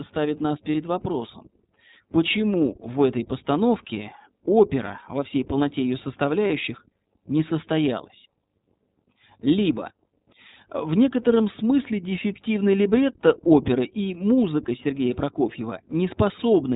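Throughout, the speech carries iLBC codec damage: a plainly audible rough, slightly synthetic quality and nothing above 4 kHz. Each frame's excitation is coded on its own, and the narrowband character fits the 15.2 kbps mode with 20 ms frames.

Lost iLBC frames occur from 0.72 to 0.76 s, after "ставит нас", and from 6.48 to 6.51 s, after "во всей полноте ее". Each sounds like a brief held, faintly buzzy vowel, consistent with one missing 20 ms frame concealed by repeating the last pitch cycle with added noise. Speech recovers immediately afterwards.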